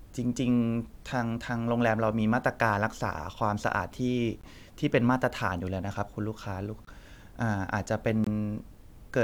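Speech with three blocks of digital silence, at 4.41–4.44 s, 6.85–6.87 s and 8.24–8.27 s. Each drop lasts about 23 ms, which fits a 1024-sample buffer the program failed to fill in time. The signal cuts out and back without a fade, leaving a brief hole.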